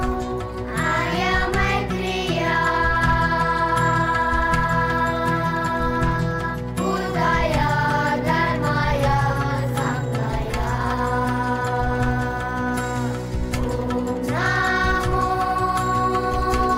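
Hard clipping runs through the whole clip. The signal reaches a stage about 4 dB hotter than it can pass. The peaks are sliced flat at the ceiling. Only a small fraction of samples go over, well under one percent. So the damage sits on the loudest moments. Those flat tops add harmonics high in the spectrum. Each peak carries a brief crackle or rasp, which comes and goes with the loudest parts of the sound.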